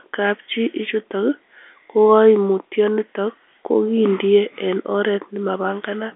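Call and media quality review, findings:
No faults found; telephone-band speech, narrowband line audio.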